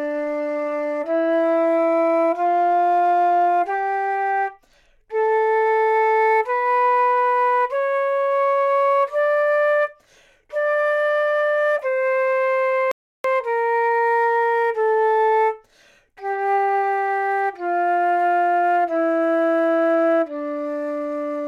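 At 12.91 s the player likely ran out of buffered data, causing a playback stall: the sound cuts to silence for about 0.33 s and resumes at 13.24 s.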